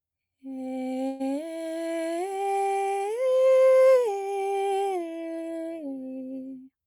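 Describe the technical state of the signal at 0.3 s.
At 0.3 s the music plays through cleanly, with no dropout, click, distortion or other fault audible at that moment.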